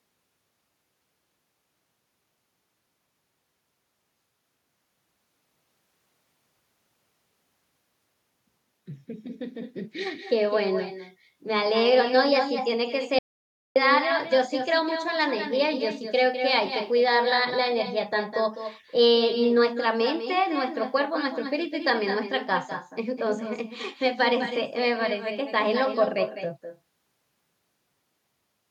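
Throughout the speech, every phrase is shadowed about a fifth of a second later by a thinner copy about 9 dB down: echo with no canceller, the far end's loudspeaker feeding its microphone. From 13.19 to 13.76 s the audio drops out to dead silence with no room tone, losing about 0.57 s, likely a briefly lost input.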